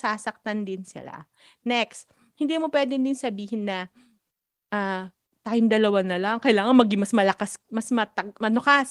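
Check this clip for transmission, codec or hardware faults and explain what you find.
No transmission, codec or hardware faults.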